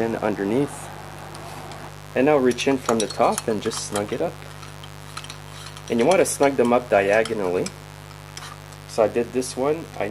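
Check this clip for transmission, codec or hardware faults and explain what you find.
A mains buzz runs through the whole clip. It is a steady, raspy buzz on a 50 Hz mains fundamental, with harmonics reaching into the kilohertz range. Switching spikes from a dimmer, rectifier or unshielded run enter twice per cycle. It sits roughly 20 dB below the programme.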